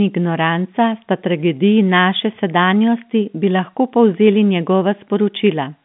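No technical faults are audible.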